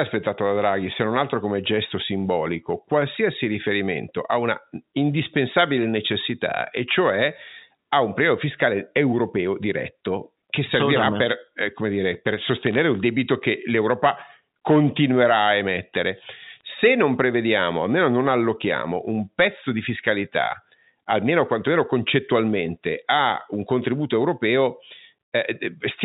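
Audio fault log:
12.48–12.79 s, bit errors on a digital phone line: a burst of sharp ticks over intact speech, from scattered flipped bits (around one in five hundred), shown as thin vertical spikes and full-band spectrogram streaks.
16.61 s, bit errors on a digital phone line: a brief tick from a few flipped bits, appearing as an isolated spike on the waveform and a narrow vertical line in the spectrogram.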